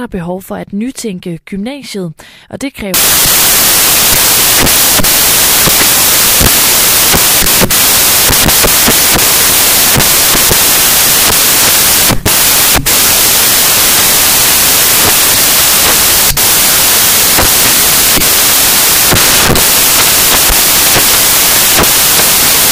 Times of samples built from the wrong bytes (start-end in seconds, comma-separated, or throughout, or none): 2.94-22.71